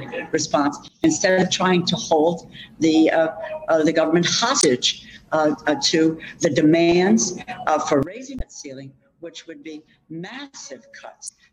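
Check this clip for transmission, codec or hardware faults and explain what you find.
Two kinds of fault are present: sudden gain jumps and damaged data in the compressed stream.

Sudden gain jump: from 0.88 to 1.04 s, and from 8.03 s to the end, the level drops by about 19 dB and about 17 dB respectively. The sound and background noise fall together. This is likely a gain change applied without a ramp.

Damaged data in a compressed stream: brief blips at 4.59, 8.36 and 11.25 s, each about 50 ms long. The decoder misreads corrupted frames and loses sync, so the sound is briefly disrupted at each point.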